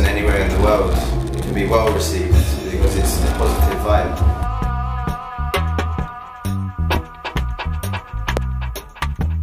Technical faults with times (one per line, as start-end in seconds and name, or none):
6.95-6.99 loud pop
8.37-8.41 loud pop